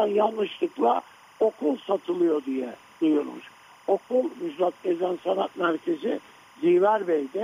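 Linear timecode running at 25 frames per second is leaking in from a neighbouring track or cable for the whole clip, a case of timecode bleed. The code is a square wave that flips between two pitches, around 1 kHz and 2 kHz, and it sits about 30 dB below the wanted audio. It comes through as a constant, faint chirping warble behind the sound, ticking along at the frame rate from start to finish.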